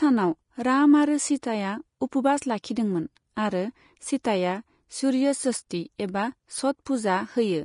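Throughout the speech, a low-bitrate lossy codec, likely Vorbis compression at a setting consistent with about 33 kbps, quantises the treble coarsely and removes everything above 10.5 kHz. Fine high-frequency detail becomes grainy hiss, tones sound roughened, and the top end is plainly dull.

At 1.42 s, just after "राम आरो", pre-echo appears. The codec spread its quantisation noise across a whole transform block, so a sharp onset late in that block is preceded by about 11 ms of hiss, which softens and smears the attack.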